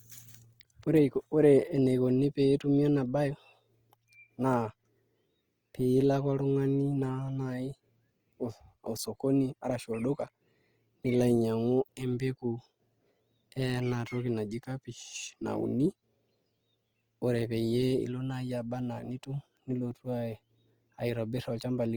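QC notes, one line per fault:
throughout: Opus compression. The encoder likely ran short of bits, at a rate that points to around 24 kbps, and stayed in its full-band CELT mode, holding each band's energy but padding starved bands with folded copies of lower ones or with noise. The speech keeps its full bandwidth, reaching up to about 20.2 kHz with no muffling, yet the codec damage is plainly audible: voiced sounds come out rough, grainy and noisy rather than swirly.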